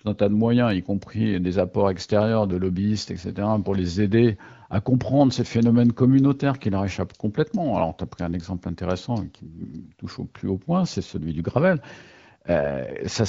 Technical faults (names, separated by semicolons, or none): none